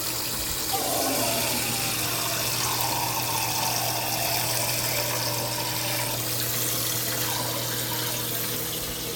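A recording of everyday sounds with no technical faults audible anywhere in it. Nothing in the audio breaks, drops out or jumps at any point.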